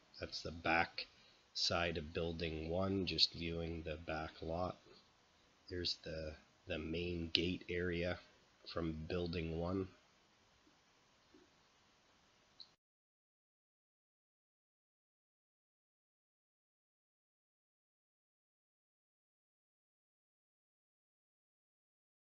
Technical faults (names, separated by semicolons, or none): none